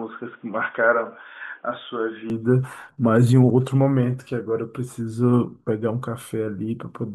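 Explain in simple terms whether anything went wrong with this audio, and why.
For the first 2.3 seconds the speech sounds dull and boxy, with nothing above 3.7 kHz, slightly quieter, and with faint added background noise. It then opens up without a gap. The likely cause is an input switched to a poorer device.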